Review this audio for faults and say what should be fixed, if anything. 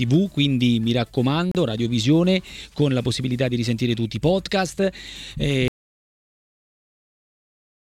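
At 1.51 s the sound cuts to silence for about 34 ms, then resumes at 1.55 s. This is a Bluetooth stall. The likely cause is radio interference holding packets back, so the headphone buffer ran dry and playback paused until the resent packets arrived. The gap is brief. Keep the source device close to the headphones and away from competing 2.4 GHz traffic.

From 5.68 s the audio drops out to silence and never returns. The gap runs to the end of the clip, roughly two seconds. This is an audio dropout to silence. The gap is silent, with no room tone underneath. The likely cause is a lost input, from a disconnected device, a failed link or a stray mute, while recording carried on writing empty samples. Anything after 5.68 s is gone. Secure cables and connections, and monitor input levels while recording.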